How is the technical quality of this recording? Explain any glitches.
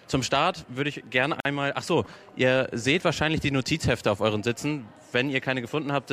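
The quality is let down by one glitch. At 1.40 to 1.45 s there is a gap at a join of encoded pieces: separately encoded segments were spliced untrimmed, leaving encoder delay and end padding in place. The result is a roughly 48 ms gap with smeared edges, after which the sound resumes exactly where it stopped.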